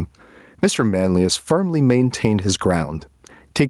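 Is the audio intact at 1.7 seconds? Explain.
No. At 1.7 seconds, as throughout the speech, there is gain pumping: the input gain is likely set far too high, so a fast limiter clamps down on every loud syllable. The gain swings by roughly 15 dB, leaving the speech squashed.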